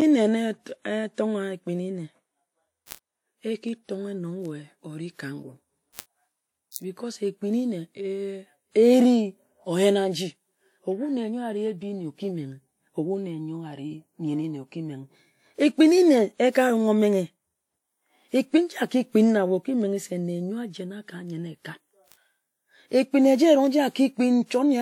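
Word clock ticks, 0.62 to 24.42 s: an unlocked receiver, roughly 30 ppm off, slips one sample about every 0.7 s, giving sharp ticks of uneven strength. Pre-echo at 2.86 s and 6.71 s: codec noise spread across a block fills the gap before late attacks, adding 58 ms and 48 ms of hiss and smearing the onsets.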